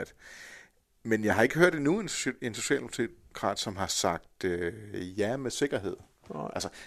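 Nothing technical stands out in this short bit of speech, so there's no fault here to time or explain.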